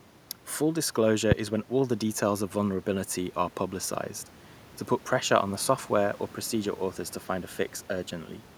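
No technical faults are audible in this speech; the only background is the room's own noise, sitting about 29 dB below the speech.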